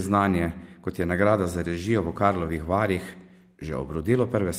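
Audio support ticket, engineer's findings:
Listened through the whole speech recording and found nothing to flag, so no findings to log on this ticket.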